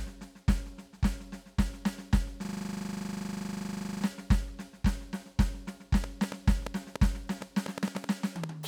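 System hang loop from 2.45 to 4.04 s in this music clip: the playback freezes while the hardware keeps cycling one 40 ms slice of its ring buffer, so that fragment repeats exactly dozens of times, producing a rough 25 Hz buzzing stutter. A train of clicks follows from 6.04 to 8.45 s, with around fifteen similar pops at an uneven pace of roughly five per second, standing well above the music, likely from electrical interference or a faulty connection or power supply injecting pulses.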